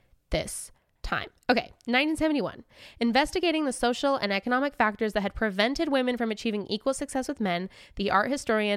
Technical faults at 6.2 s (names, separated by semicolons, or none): none